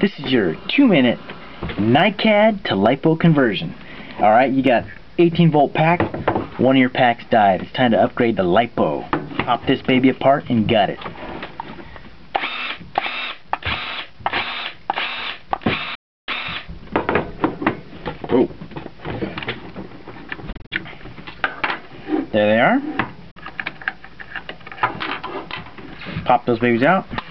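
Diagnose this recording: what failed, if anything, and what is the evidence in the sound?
The failure is in the wireless playback link, most likely a Bluetooth dropout. The sound cuts to silence from 15.95 to 16.30 s, then in a cluster of short holes between 20.52 and 20.73 s (the longest about 46 ms), and again from 23.31 to 23.38 s. Each time it resumes further along, as if it had played on, so material is skipped rather than delayed as in a buffer underrun, and no concealment fills the gaps.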